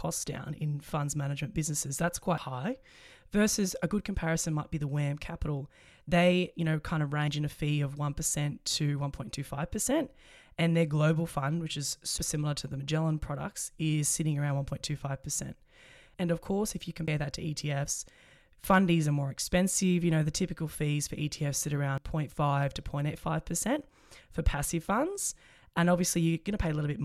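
Speech jumps forward at 2.38, 7.28, 12.18, 17.08 and 21.98 s: after "funds management businesses that's", between "you know kind of" and "in a fee of", and between "global fund which is" and "similar to the". About a tenth of a second vanishes each time and the two sides butt together with no silence. This is likely audio missing between chunks, with processing in 5 s blocks. The steady spacing and seamless joins set it apart from random dropouts, which leave audible gaps.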